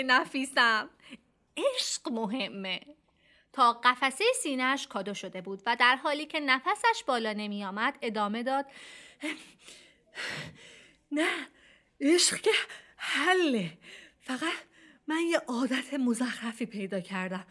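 No technical faults can be heard anywhere in the recording, and the signal stays steady throughout.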